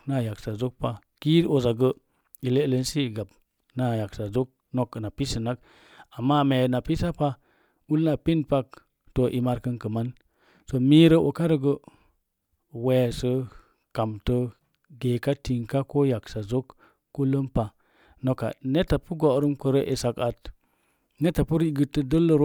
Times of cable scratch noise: none

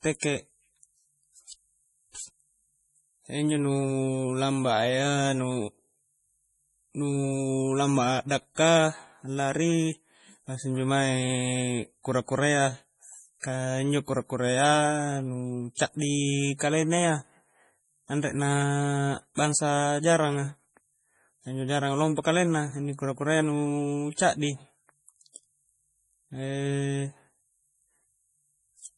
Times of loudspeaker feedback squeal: none

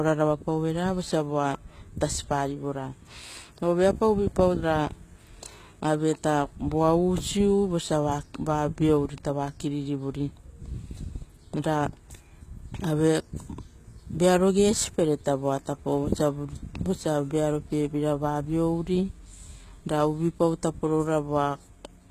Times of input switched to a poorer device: none

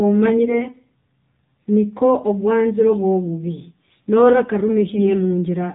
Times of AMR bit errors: 4.94-5.11

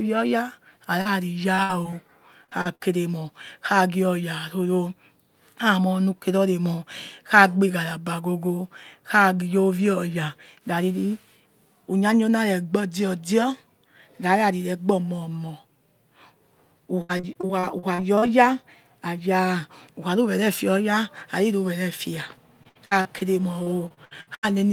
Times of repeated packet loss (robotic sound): 1.55-1.94, 2.44-2.81, 17.01-18.28, 22.63-23.23, 23.63-24.45

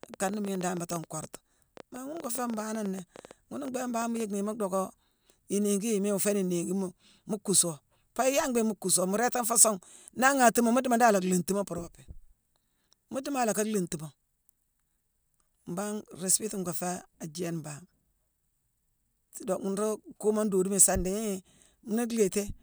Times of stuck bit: none

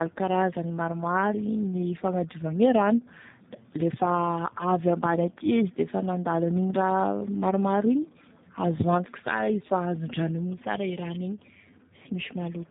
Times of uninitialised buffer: none

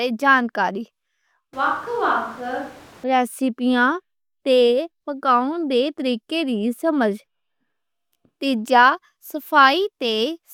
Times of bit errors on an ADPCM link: none

